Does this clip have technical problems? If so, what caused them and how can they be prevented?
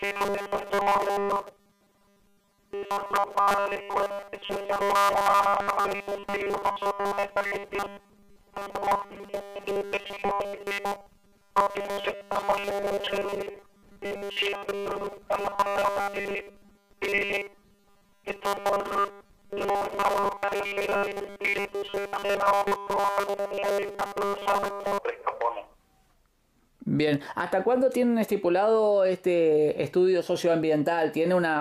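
Yes. From 0.01 s to 24.98 s the sound has a robotic, metallic buzz at 200 Hz that only loosely tracks the original. The likely cause is new audio arriving too slowly, so the playback side keeps repeating the last tiny chunk and skips real material, here for roughly two-thirds of the time. A 200 Hz buzz fits a 5 ms chunk. To prevent it, give the stream a larger buffer or fix whatever is starving it.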